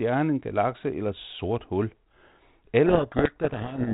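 From 2.86 s to the end of the clip, a codec payload misread takes over. The G.726 code words arrive with their bit order reversed, so the decoder applies each adaptive step to the wrong difference value and the speech is buried under harsh, rasping distortion. On a spectrogram, broadband noise fills the band up to the 4 kHz ceiling of the 32 kbit/s G.726 path. The waveform turns dense and ragged, with the speech envelope barely visible.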